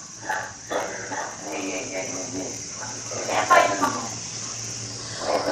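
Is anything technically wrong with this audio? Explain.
Yes. A block size mismatch (padded) runs through the whole clip. Each block is topped up with a short zero-filled gap, creating a buzz at about 91.9 Hz and slowing the audio to 0.919 speed. The waveform shows regular dropouts, and the spectrogram shows evenly spaced vertical gaps with harmonic striping.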